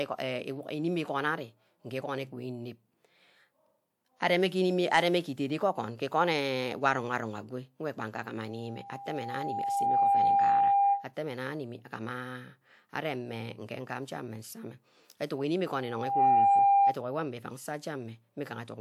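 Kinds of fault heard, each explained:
Loudspeaker feedback squeal: a microphone-to-speaker loop rings at 799 Hz, twice swelling to about 10 dB above the speech, a horizontal spectrogram line.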